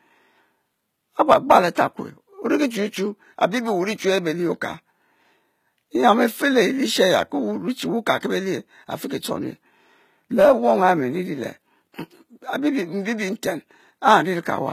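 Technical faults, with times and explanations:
Throughout, HE-AAC compression: the treble sounds synthetic and gritty, with s sounds turning lispy and metallic, and nothing above 14.9 kHz. This is likely a low-rate HE-AAC encode, around 20 kbps, where the upper band is rebuilt by copying lower bands upward, so its harmonics no longer align.
1.75 s, pre-echo: a brief hiss of about 15 ms leads into an attack, softening its onset. The codec spreads quantisation noise across the whole transform block, so noise sized for the loud transient also fills the quiet moment just before it.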